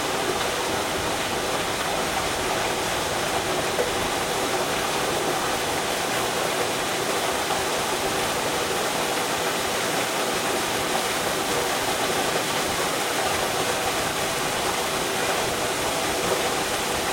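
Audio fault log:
No technical fault can be heard anywhere in this recording of sounds, and the signal holds steady with no break in continuity.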